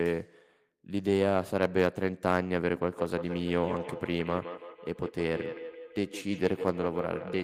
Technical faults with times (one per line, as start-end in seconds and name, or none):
2.93-7.44 feedback echo between two devices